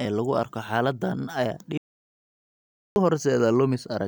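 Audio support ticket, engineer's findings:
Audio dropout to silence, 1.78 s to 2.96 s, right after "lagu arko xaaladdan ayaa". Speech cuts off mid-flow, about 1.19 s of silence, no room tone. Likely input loss (device disconnect, link failure or mute) while the recorder kept writing. Content lost.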